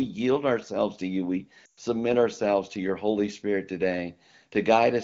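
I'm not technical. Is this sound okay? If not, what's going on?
No. Lost AMR speech frames at 1.65 to 1.72 seconds, just before "submit ourselves to your": radio errors corrupted pieces of the call, so the phone filled the gap with a fading guess, briefly dropping the sound to near silence.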